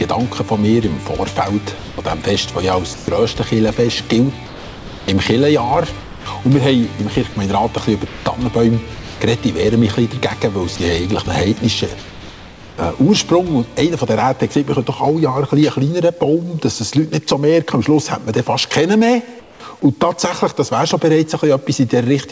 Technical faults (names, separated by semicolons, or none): sound chopped by the voice detector; sound dropped by the voice detector; comfort noise in place of the background